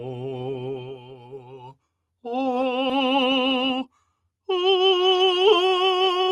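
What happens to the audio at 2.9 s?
The music jumps forward at 2.89 s with no gap, losing roughly 0.4 s of material. The two sides of the cut butt straight together at about 2.91 s, so the phrase lurches. This is a skip ahead. A stretch of audio was dropped while later audio was already queued, either in transit or when the jitter buffer overflowed. Playback resumed from the newer material instead of pausing, and nothing was inserted to fill the hole.

Right after that, from 2.99 s to 3.82 s, the music runs slightly fast at an unchanged pitch, about 108% speed, and the tempo audibly pushes ahead. This is a jitter buffer speed-up. The receiver was holding more audio than its target, so it trimmed many short pieces of one or a few pitch periods each. Together they removed around 70 ms and brought the delay back down, at the cost of a steady beat.

Across this moment, as throughout the clip, the music also pumps and thins, swinging by something like 10 dB. 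Attacks come through while sustained tones and decays sink. That is a noise suppressor applied to music: a processor built for speech treats held notes and reverb tails as noise and turns them down.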